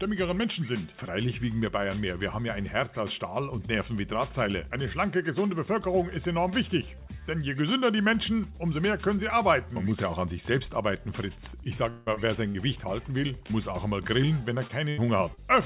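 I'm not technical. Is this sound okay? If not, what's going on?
No. Several moments near the end sound broken, all from the connection rather than the recording itself. The whole clip also has the slightly muffled, telephone-like tone of the call path, with nothing above 4 kHz.

From 11.9 to 12.08 s the sound suddenly turns into a smeared, held buzz or hiss for about 0.16 s, then picks up again further along. This is most likely a long network dropout: a stretch of audio failed to arrive, and the receiving end kept stretching out the last sound it had to cover the hole. That part of the original audio is gone.

At 12.14 to 12.18 s and again at 13.47 to 13.51 s there are tiny glitches, a quick smear or wobble lasting only a few hundredths of a second. Each is a short concealed packet loss: one small piece of audio arrived too late, so the receiver filled the gap by briefly continuing the previous sound and then blended back in. 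A short sound at those points could disappear entirely.

From 12.48 to 12.57 s the sound catches on itself, a brief held buzz or fading hiss of about 60 ms, and then jumps ahead. This is a burst of packet loss: a few pieces in a row were lost together, so the receiver kept the last sound going while turning it down, and the missing stretch was skipped.

From 14.67 to 15.39 s the sound turns choppy and robotic. This is repeated packet loss (robotic sound): four separate gaps hit in quick succession, the longest about 81 ms. Each gap was patched by repeating the previous sound, so about a fifth of that stretch is filler rather than the real audio.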